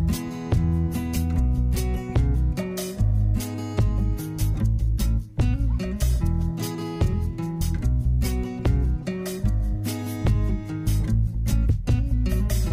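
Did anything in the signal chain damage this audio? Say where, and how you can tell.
No, nothing in the signal chain damaged this audio that I can hear.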